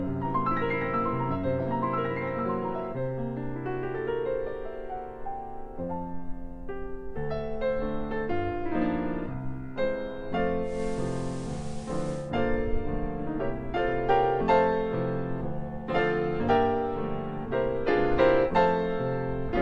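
At about 10.62 s the digital radio is blending to analogue, falling back to the station's FM feed over a roughly 0.2 s cross-fade. Hiss rises to around 25 dB below the signal, level shifts about 1 dB, and it returns to digital near 12.33 s.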